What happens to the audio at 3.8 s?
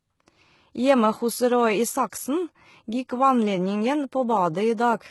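At 3.8 s the treble sounds gritty and metallic, with s sounds turning lispy and nothing above 11.8 kHz, as across the whole clip. This is likely heavy HE-AAC compression at a very low bitrate, rebuilding the upper band from copied lower bands.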